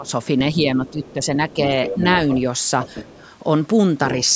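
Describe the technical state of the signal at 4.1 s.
At 4.11 s a faint second voice slips in under the main speech and lingers until 4.24 s, sitting roughly 20 dB below it. This is the other side's voice leaking through: the talker's device is likely playing the far end over its loudspeaker, and the echo canceller failed to strip that playback from the microphone pickup, so a residue of it reaches the call.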